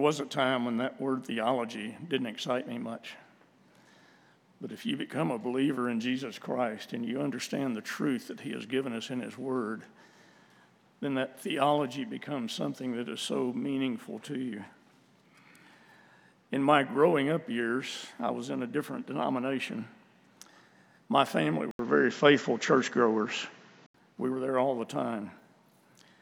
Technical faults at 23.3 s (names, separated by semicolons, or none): input switched to a poorer device